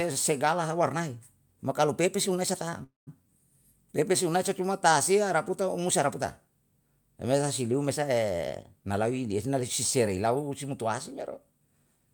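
A speech recording with two faults. At 2.83 s the sound stalls into a fading buzz or hiss and about 160 ms of silence before resuming at 3.09 s, likely a call audio freeze from delayed packets emptying the jitter buffer. After "si liu me sa", from 8.47 s to 11.68 s, speech runs hurried at unchanged pitch, about 7% fast. This jitter buffer speed-up trimmed roughly a third of a second of pitch periods to cut excess delay.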